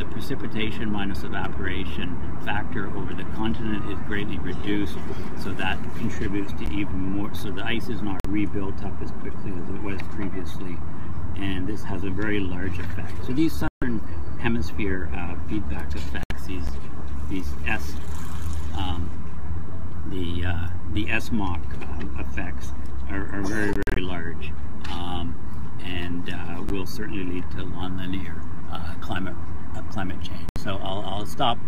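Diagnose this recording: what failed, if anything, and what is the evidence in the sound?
A DC offset in the converter or analogue stage shifts the whole waveform off zero, wasting headroom and leaving steady energy at the very bottom of the spectrum.

A gap between chunks at playback or storage leaves a 13 ms silence every 10 s, at 6.66, 16.67 and 26.69 s, interrupting the sound without losing any.

Silences at 8.2 s (46 ms), 13.7 s (139 ms), 16.2 s (70 ms), 23.73–23.98 s (scattered) and 30.5 s (70 ms) are likely a Bluetooth dropout from late packets, with sound resuming further on.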